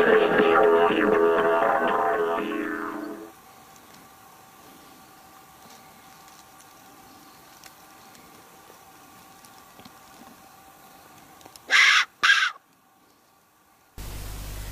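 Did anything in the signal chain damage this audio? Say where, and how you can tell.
Yes: overlap between stream segments at playback. From 12.24 to 12.26 s, 25 ms of sound is cut and the waveform jumps, a tiny skip without a dropout's silent gap.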